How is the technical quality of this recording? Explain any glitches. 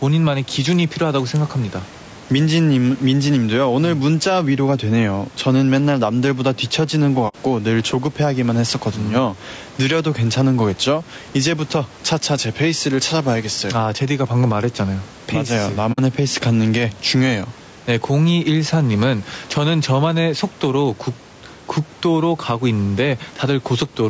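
The recording has three audible problems: level pumping, coarse codec texture throughout, and two brief dropouts.

Gain pumping runs through the whole clip. The level likely sits too high into a fast limiter that clamps down on each loud syllable, swinging the level by around 5 dB and squeezing loud and quiet parts together.

Low-delay AAC compression is also plainly audible throughout, most likely AAC-ELD at a rate around 32 kbps. Its very short frames resolve pitch harmonics poorly, so the speech sounds rough and grainy, with noise filling the gaps between harmonics and an artificial-sounding top end.

AAC frame loss with muting occurs at 7.28 to 7.35 s and at 15.92 to 15.99 s. Missing frames were decoded as silence, which fits two lost frames each time, and the overlapping windows fade the sound out and back in, leaving soft-edged holes.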